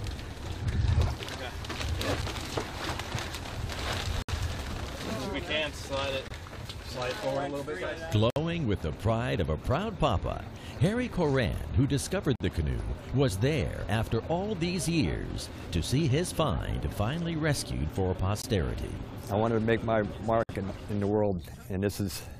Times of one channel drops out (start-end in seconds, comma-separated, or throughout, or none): none